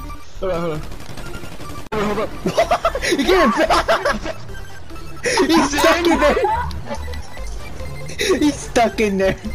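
Nothing in this audio stands out as a technical fault; it runs along without any glitch, dropout or disturbance worth pointing to.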